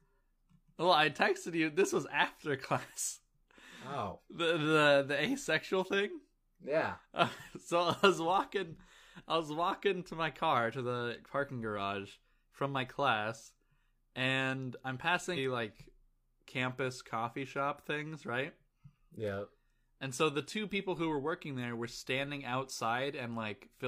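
A brief glitch cuts in at 15.33 to 15.39 s, between "and I'm" and "like campus coffee shop". It is damaged data in a compressed stream: corrupted bytes made the decoder misread those frames and lose sync until it found a valid frame header again.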